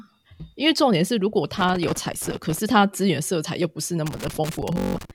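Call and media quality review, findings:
Loose connector crackle, 1.57 to 2.59 s and again 4.06 to 5.11 s: irregular scratchy bursts over the speech. Likely a worn or dirty plug/jack making and breaking contact as it shifts, chopping the signal.

Bluetooth stutter, 4.78 to 4.97 s, buried inside the second crackle: short machine-gun buzz where a tiny slice of audio repeats. Receiver kept replaying its last buffer while packets went missing, then jumped ahead, skipping about 170 ms of speech, which fits roughly eight dropped packets.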